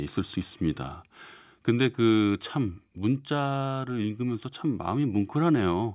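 Nothing here sounds broken; the speech runs along without any technical trouble to point out.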